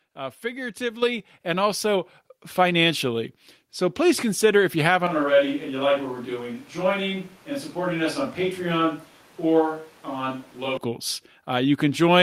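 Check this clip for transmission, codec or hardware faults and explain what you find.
Two kinds of fault turn up in this speech clip: a pair of input-level jumps early on, and a stretch where the sound moves to a far-off microphone.

First, the microphone volume stepped up, at 1.02 s by about 6 dB and again at 2.04 s by about 3 dB. It sounds like the call software decided the mic was too quiet and nudged the device's input gain up in single steps. Because the change happens at the input, the speech and the background noise get louder together, so each step is an abrupt level shift rather than a fade.

Then, right after "please consider if you" at 5.07 s, there's a switch to a distant microphone that holds until 10.77 s. The speech suddenly goes hollow and roomy, loses low end, and drops roughly 5 dB, with room noise sitting around 30 dB below the speech. That's likely the close mic's signal dropping out and the recording falling back to something further away, such as a camera mic. 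The change back at 10.77 s is just as sudden.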